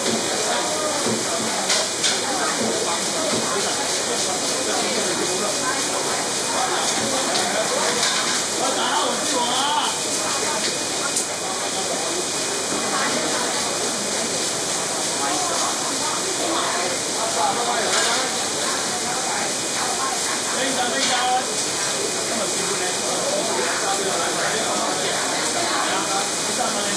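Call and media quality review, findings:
No faults found in this recording of sounds. Nothing here calls for follow-up.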